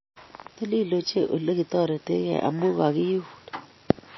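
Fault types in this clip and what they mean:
MP3 compression: The speech sounds dull and watery, with nothing above 5.8 kHz, so s sounds lose their sharpness and the audio swirls as faint detail flickers in and out. The damage is plainly audible throughout. The likely cause is MP3 encoding at a very low bitrate, one that fits roughly 24 kbps. Short of bits, the encoder cuts all treble at a fixed frequency and drops weaker frequency components from frame to frame.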